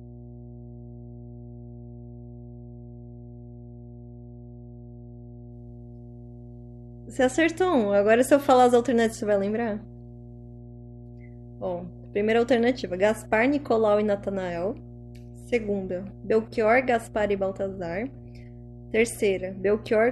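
A steady low tone sits under the speech from start to finish, pitched at 60 Hz with some low harmonics and roughly 20 dB below the speech level. This is mains hum: a ground loop or nearby transformer has coupled the power line into the signal.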